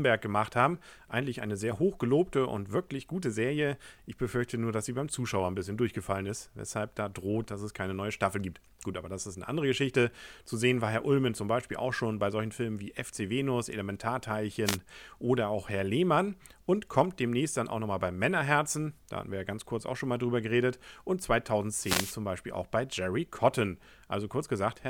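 At 14.65 s a short swish of static cuts across the speech for about 0.13 s, and at 21.81 s a longer burst lasting about 0.35 s follows. Both are wireless microphone noise hits: the analogue FM radio link faded as reflected signals cancelled, so receiver hiss rose over the voice. Unlike a digital dropout, the sound never falls silent; noise swells in and recedes with the fade.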